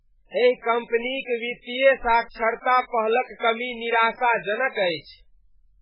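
Throughout, the speech was likely run through MP3 compression at a bitrate that fits about 8 kbps. Starved of bits, the encoder zeroes weak frequency lines frame by frame and removes everything above 5.2 kHz, leaving heavy watery, swirly artefacts and a dull top.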